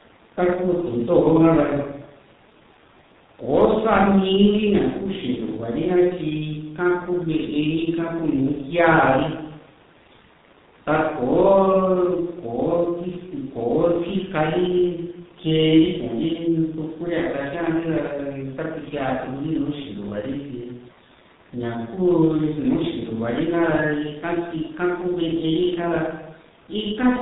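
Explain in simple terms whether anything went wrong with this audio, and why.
G.723.1 codec damage runs through the whole speech recording, from start to end. This old internet-phone codec squeezes the voice into small chunks, drops everything above 4 kHz, and rebuilds the voice only roughly, so the speech sounds heavily muffled and hoarse, with smeared consonants.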